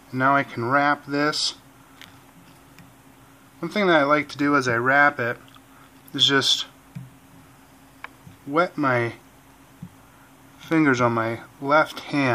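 No technical faults are audible anywhere in this audio.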